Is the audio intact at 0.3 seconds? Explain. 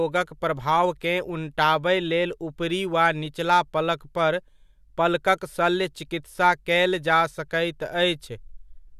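Yes, the audio at 0.3 seconds is intact, with no dropout, click, distortion or other fault at that point.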